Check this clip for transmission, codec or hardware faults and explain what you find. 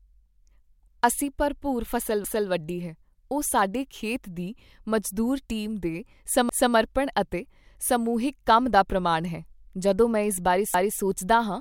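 There's one fault here, overlapping chunks, and it shows up twice: from 6.49 to 6.74 s and again from 10.74 to 10.99 s. The speech was handled in 4-second chunks, and each new chunk starts a quarter second before the previous one finished, so 250 ms of audio gets played twice at the join. You hear it as a short stutter, a little skip-back, repeating about every 4.25 seconds.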